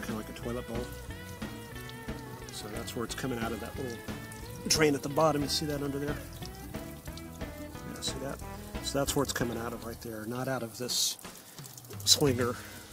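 No technical faults can be heard anywhere in the clip. Nothing in the audio calls for a timestamp or a second listen.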